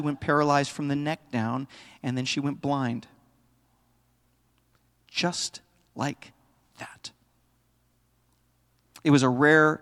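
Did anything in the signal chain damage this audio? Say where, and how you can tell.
No, nothing in this speech shows signal-chain damage.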